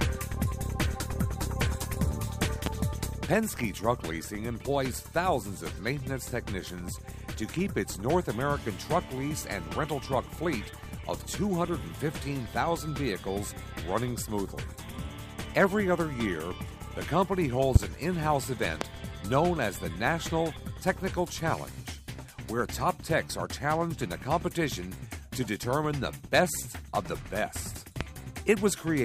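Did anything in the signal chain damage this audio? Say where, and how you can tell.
Yes. Four loud pops ride on top of the sound, at 2.66–2.69 s, 17.76–17.78 s, 18.81–18.84 s and 28.01–28.03 s. Each is one sharp pulse under 30 ms long. The first and last stand about 20 dB above the signal, the middle two about 25 dB. The sound continues underneath each. The likely cause is a sudden voltage step, from a plug, switch, static or driver glitch, shaped by the circuits after it.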